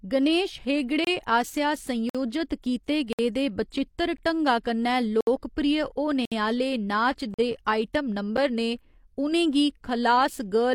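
Hard-edged silent holes cut into the speech at 1.05–1.07, 2.10–2.15, 3.13–3.19, 4.17, 5.21–5.27, 6.25–6.32, 7.34–7.39 and 8.37 s, roughly once a second and lasting between about 9 and 65 ms. These are gaps between stream segments: the timing of consecutive 1-second segments leaves a small space, and the player fills it with silence. Unlike a dropout, nothing is missing. The speech stops abruptly and resumes exactly where it left off.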